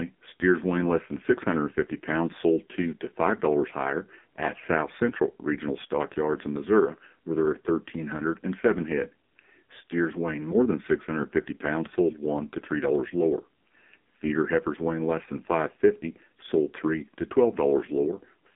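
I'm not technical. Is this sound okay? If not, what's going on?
No. From start to finish the speech sounds thin, muffled and boxy, like an old mobile phone call, with a buzzy, robotic edge. That comes from the AMR narrowband mobile codec, which squeezes the voice into a narrow phone band and throws away everything above about 3.6 kHz. It then rebuilds the voice from a rough model of the mouth and throat. Here it is squeezed very hard, so the damage is heavy.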